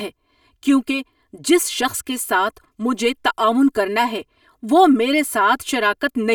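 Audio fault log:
throughout, channel delay (comb filtering): one channel arrives around 3 ms behind the other, and summing them to mono cancels the shared speech at a first notch near 150 Hz and at evenly spaced frequencies above it, roughly every 300 Hz. The speech sounds hollow and phasey, as if spoken down a tube. Unlike flanging or phasing, the notches never sweep. Unlike room reverb, there is no decaying tail after each syllable, only a fixed coloration.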